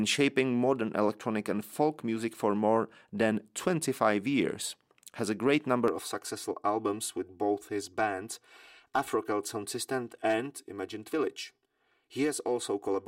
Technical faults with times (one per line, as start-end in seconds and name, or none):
5.88-13.08 channel delay (comb filtering)